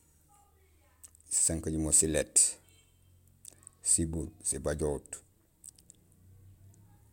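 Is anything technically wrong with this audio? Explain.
No, there are no technical faults.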